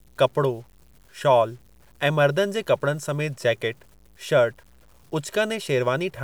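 Throughout the speech, the samples were likely truncated to a low bit depth without dither, which fits 9 bits. The error follows the signal, roughly 35 dB below it, so quiet stretches turn grainy and gritty, a distortion that shifts with the sound.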